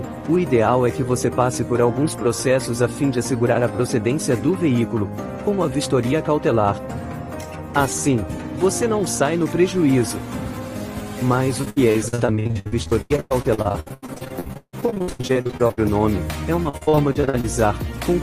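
Repeated packet loss (robotic sound) hits the audio from 11.61 to 15.79 s and again from 16.63 to 17.45 s. Dozens of short holes, the longest 156 ms, are patched by extending the preceding sound, covering about 40% of each stretch. Unlike a single dropout, the choppy stutter keeps recurring.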